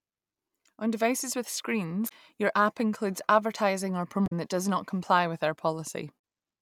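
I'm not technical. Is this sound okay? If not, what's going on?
No. At 2.05 to 2.12 s, 4.24 to 4.33 s and 6.16 to 6.18 s the speech breaks into a brief chirp or squawk that doesn't belong to it. This is damaged data in a compressed stream. Small stretches of the stored file got corrupted, so the player can't make sense of those pieces. It stumbles, plays garbled sound for a moment, then finds its place again and carries on.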